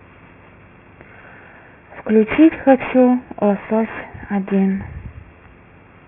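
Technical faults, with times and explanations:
throughout, aliasing: the rate was lowered without anti-alias filtering, so energy above the 3 kHz band edge folds back as metallic grit, about 15 dB below the speech.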